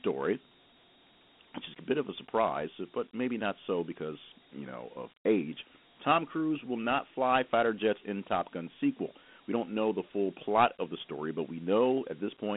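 Dialogic VOX ADPCM runs through the whole clip, from start to end. The speech has been coded as 4-bit adaptive differential samples, which fits a 32 kbps stream at 8,000 samples a second. Nothing is heard above about 3.9 kHz. The line band sits between about 200 Hz and 3.5 kHz, so the sound is thin and boxy. The coding damage is plainly audible as a gritty hiss that follows the speech.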